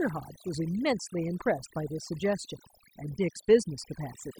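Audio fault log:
Throughout, overdone noise removal: the background drops and breaks up into twinkling, warbling specks. A noise reducer set too strong is muting individual frequency bands that sit close to its noise estimate, taking quieter parts of the speech with them.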